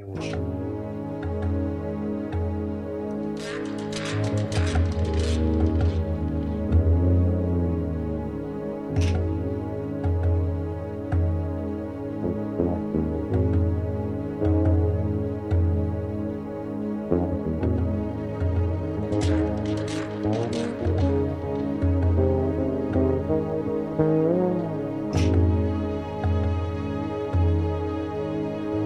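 A time-stretched section runs from 17.31 to 21.10 s, where the pace jumps to about 1.37 times normal while the pitch stays where it was. The sound turns rushed, then returns to its earlier pace at the end of the span. The likely cause is software squeezing this passage to fit a shorter length, dropping short slices of audio to hold the pitch, which leaves the hurried feel.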